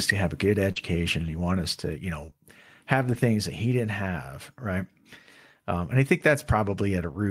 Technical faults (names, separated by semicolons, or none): short concealed packet loss; lost packet rebuilt from error correction